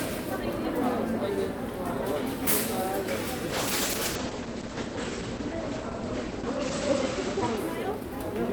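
From 3.43 s to 7.63 s the sound goes through a call bitrate drop. The connection's bandwidth estimate fell, so the encoder had far fewer bits to spend. The top end narrows from 20 kHz to 8 kHz, and for about 3.5 s at the bottom the texture turns rough and watery, which fits a fall from around 48 kbps to around 11 kbps. Unlike packet loss, nothing drops out or stutters. Unlike a plain low-pass filter, the coarse, warbling grain comes along with the dulling.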